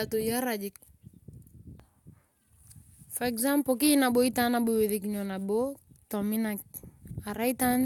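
No faults are audible anywhere in the recording.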